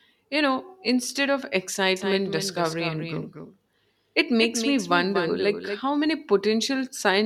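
From 1.96 s to 5.80 s the speech carries a doubled audio track: a second, full-band copy of the same material runs roughly a fifth of a second behind the original and somewhere around 10 dB quieter. It has no decay or room colouring, so it reads as a flat slapback rather than reverb, and it switches in and out abruptly at both ends. The likely cause is the signal being captured a second time through a slower path.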